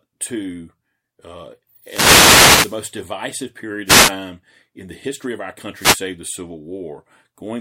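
Speech, with three wireless microphone noise hits at 1.83 to 2.81 s, 3.85 to 4.13 s and 5.74 to 6.05 s. Each is a burst of static as the radio signal fades.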